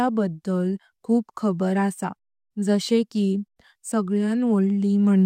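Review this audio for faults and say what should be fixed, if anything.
Nothing stood out on listening to this speech recording, so there is nothing here that needs fixing.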